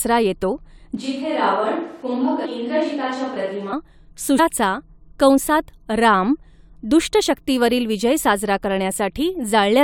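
The close microphone likely dropped out, leaving this speech recording on a distant microphone from 0.97 to 3.73 s, so the sound turns roomy and hollow, thinner in the bass, about 5 dB quieter, with more room noise, about 30 dB below the speech. Damaged data in the compressed stream made the decoder lose sync, producing brief glitches from 2.44 to 2.46 s and at 4.38 s.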